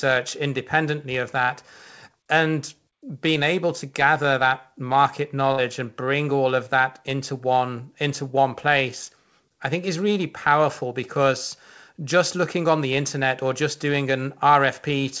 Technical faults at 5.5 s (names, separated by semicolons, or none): burst of packet loss